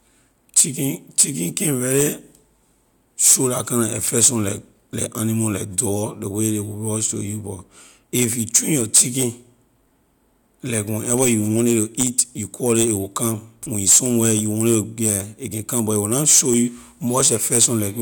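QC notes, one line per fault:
Nothing to flag on this speech clip; there's no fault to log here.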